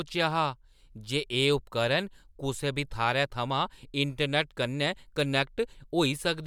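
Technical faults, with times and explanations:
No technical faults were detected in this speech recording.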